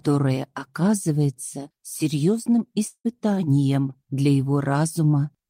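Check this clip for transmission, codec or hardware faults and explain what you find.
One transmission fault stands out: a long network dropout from about 2.87 s to 3.07 s. The sound breaks into a fading buzz lasting about 0.17 s, then about 0.08 s of near-silence, before the audio resumes with roughly 0.18 s of material simply gone. The likely cause is a stretch of lost packets, with the receiver extending the last sound until it ran out. On a spectrogram the harmonics smear, decay, and leave a dark gap; the waveform shrinks to flat before jumping back.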